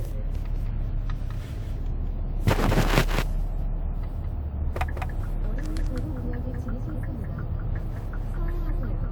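Throughout the clip, every sound is followed about a fifth of a second later by a full-band copy of itself, a few decibels quieter, with no decay or room colour. This doubled audio track likely comes from the same audio being captured twice, once through a slower path.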